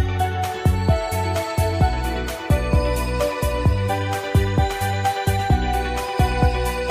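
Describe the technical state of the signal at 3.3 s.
At 3.3 s the signal is intact, with no audible fault at that point.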